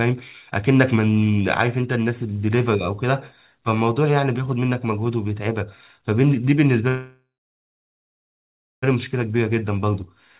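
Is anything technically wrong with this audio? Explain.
Yes, there are two faults, both from network timing on a call path. The band stops at 4 kHz, which fits a G.711 mu-law telephone codec.

A call audio freeze runs from 6.88 to 8.84 s. The sound stops moving forward. The last moment is stretched into a fading buzz, then about 1.57 s of silence. The likely cause is packets held up in transit, leaving the jitter buffer empty. When they arrive, the sound resumes where it stopped. Nothing is lost, but about 1.94 s of extra delay is added.

A jitter buffer speed-up follows from 8.96 to 10.16 s. The buffer now holds more audio than it wants, after the late packets arrive together. To cut that delay, the receiver trims tiny pitch-period slices again and again. Roughly 0.15 s is removed in total. The speech plays at about 111% speed with the pitch unchanged, so it sounds hurried.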